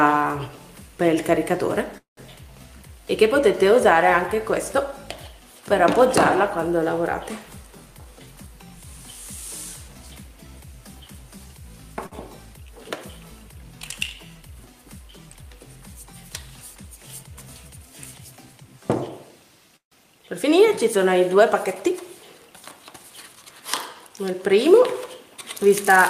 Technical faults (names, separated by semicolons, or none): call audio freeze; jitter buffer speed-up; short stall from a late packet